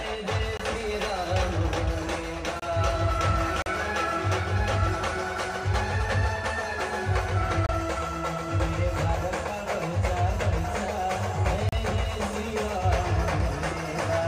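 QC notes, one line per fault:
0.57, 2.60, 3.62, 7.66, 11.69 s, gap between stream segments: hard-edged silent holes of 22 to 39 ms on one-second segment boundaries, where mismatched timestamps leave the player filling with silence.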